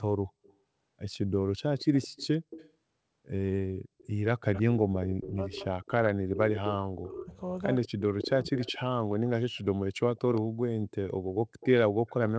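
A delayed second copy of the speech trails the talker in five places: very softly at 0.43–0.54 s, more clearly at 1.79–2.72 s and 3.98–4.62 s, then loudly at 5.86–6.73 s and through 7.75–12.13 s, where it sits only about 10 dB below the speech. That ghost, arriving a steady 165 ms late, is an echo leak, likely from a loudspeaker at the far end whose echo canceller let part of the playback back into its microphone. Between 4.41 and 8.59 s the speech from the loudspeaker side also dips and breaks up in pieces, for around three seconds in total and at worst by about 40 dB. This is speech suppressed in double talk, likely because the canceller could not separate the local talker from the returning echo while both overlapped, so it turned both down. The band-limited sound, with nothing above 8 kHz, fits the G.722 call path.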